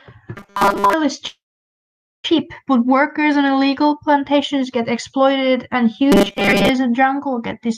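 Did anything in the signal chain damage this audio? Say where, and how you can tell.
Yes. Robotic sound from repeated short buffers at 0.36–0.93 s and 6.12–6.69 s: a rigid 200 Hz buzz, which fits a 5 ms buffer looping, likely at the driver or buffer stage, replacing most of the real audio.

A call audio freeze at 1.27–2.26 s likely happens on the network side. About 0.97 s is filled, mostly silence, and the audio then resumes exactly where it stopped, losing nothing, unlike the robotic segments.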